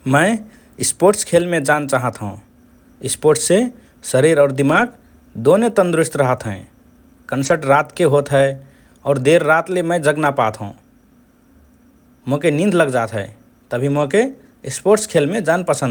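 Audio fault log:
4.69–4.91 s, 7.41–7.55 s, 8.47–8.49 s, 13.89–14.07 s: lost packet rebuilt from error correction. Brief rough, noisier patches of about 120, 80, 20 and 100 ms appear between "शरीर और" and "दोने तन्दुरुस्त रहत हए", just before "रातके होत", just after "रातके होत", and near the end. Each lost stretch was replaced with the low-bitrate copy carried in the following packet, so the speech keeps going with no dropout. Unlike concealment, which invents audio by extending what came before, there is no smeared, repeated or buzzy tail, only a brief dip in quality. The lengths fit 20 ms packets.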